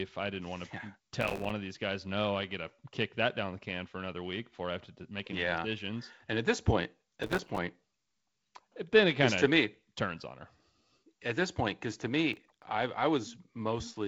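A speech recording carried over G.722 wideband telephone coding, with nothing above about 7.8 kHz, has three bursts of processor overload crackle: 1.21–1.50 s (between "didn't want to yeah" and "of these guys no"), 7.23–7.58 s (after "at this point"), and 12.33–12.63 s (between "this point because to" and "I I"). In each burst the processor misses a run of audio buffer deadlines. The pattern of tiny dropouts points to buffers of about 3 ms. Each missed buffer becomes a hard-edged silent gap, and the dense string of gaps sounds like gritty tearing. On a waveform these show as a comb of short flat notches. A spectrogram shows thin full-height vertical streaks.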